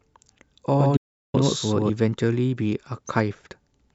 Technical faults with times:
0.76-1.90 doubled audio track
0.97-1.34 audio dropout to silence

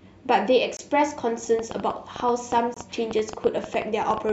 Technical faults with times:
0.77-0.81 corrupt frame muted
1.59-4.30 train of clicks
2.74-2.78 corrupt frame muted

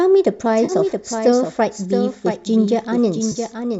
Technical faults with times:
0.00-3.80 doubled audio track
0.65-0.72 AAC frame loss with concealment
3.31-3.37 AAC frame loss with concealment

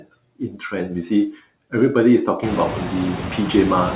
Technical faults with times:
0.00-3.95 noise suppressor artifacts
0.00-0.10 speech cut by the noise suppressor

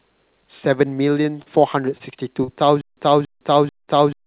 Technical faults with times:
1.22-1.48 short concealed packet loss
1.98-2.02 short concealed packet loss
2.44-2.50 short concealed packet loss
2.81-4.27 stutter with silent gaps
3.84-3.90 short concealed packet loss

